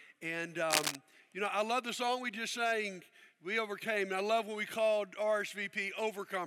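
From 0.70 to 0.96 s, cable scratch noise rustles roughly as loud as the sound, likely a worn connector shifting contact, showing as dense broadband streaks and ragged waveform spikes.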